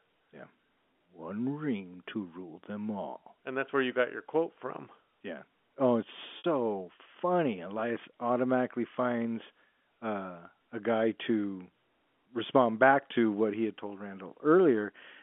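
At 6.38 s, right after "from yeah oh it's", a packet loss with pitch repetition lasts about 60 ms, to 6.44 s. That length fits three 20 ms packets going missing. The receiver bridged the gap by looping the last pitch period, so the speech briefly stalls into a held, buzzy tone before "funny elias automatically finds" resumes. A waveform shows identical repeating cycles there. A spectrogram shows frozen, flat harmonic lines within the 250 to 3400 Hz band of the G.711 telephone line.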